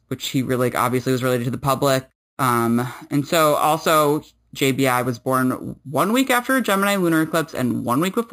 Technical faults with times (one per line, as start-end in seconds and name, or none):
0.00-8.32 imaging from sample-and-hold upsampling